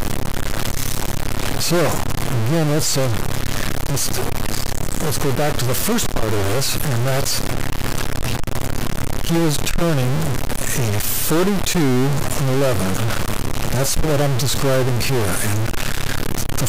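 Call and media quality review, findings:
Harsh buzzy distortion throughout; quiet gaps noise-filled at about -15 dBFS. Likely stuck bit in converter or data line, offsetting samples by its weight.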